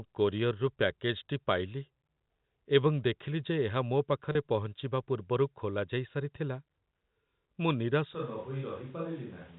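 At 4.32 to 4.35 s the sound briefly holds on a slightly buzzy, frozen tone for about 30 ms before carrying on. This is packet loss with pitch repetition: a gap that fits a single lost packet was bridged by repeating the last pitch period and fading it out.

From 8.15 s to the end, the speech turns suddenly roomy and hollow, thinner in the bass, about 5 dB quieter, with room noise rising to roughly 25 dB below the speech. The likely cause is a switch to a distant microphone after the close one dropped out. The audio is narrowband throughout, cut off at 4 kHz by the G.711 telephone coding.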